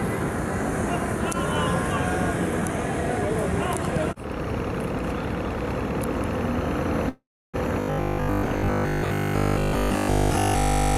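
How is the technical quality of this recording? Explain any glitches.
Two transmission glitches affect the second half of the recording.

From 7.09 to 7.56 s there is a call audio freeze. The sound stalls and is carried on as a decaying buzz that drops to silence for about 310 ms of the 448 ms gap. Packets were likely delayed and the jitter buffer ran dry, so the receiver extended the last sound. When playback resumes, nothing has been lost, but everything after this point plays 448 ms later.

From 7.81 s to the end at 10.97 s there is robotic sound from repeated short buffers. The audio becomes a stiff, metallic buzz locked at 50 Hz. This is likely caused by new data arriving too slowly, so the player loops the most recent 20 ms chunk to fill the time. Most of the real audio in this stretch is skipped, and the fixed repeat rate imposes that 50 Hz buzz.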